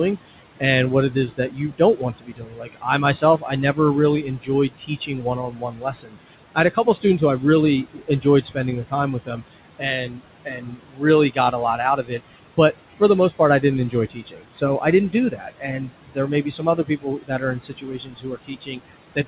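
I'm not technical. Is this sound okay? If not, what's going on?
No. Throughout the clip there are noise suppressor artifacts. A filter meant to remove the steady background noise pushes it down between words and lets it creep back underneath them.

There is also speech cut by the noise suppressor, from 0.6 s to the end at about 19.3 s. The filter mistakes parts of the talking for background noise, so soft consonants and word endings are turned down and sound swallowed or faint.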